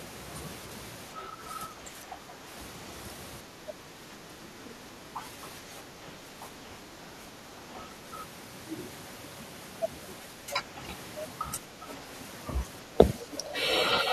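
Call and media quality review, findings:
Speech suppressed in double talk, six spots: 1.1–2.42 s, 3.43–5.24 s, 5.61–7.62 s, 7.93–8.04 s, 11.7–12.1 s, 12.87–13.56 s. Talker dips and chops in patches, mostly shallow (about 5 dB), deeper around 3.43–5.24 s and 12.87–13.56 s (about 10 dB). Likely the echo canceller's suppressor: far end talking over us, it can't tell near speech from loudspeaker echo, so it ducks everything.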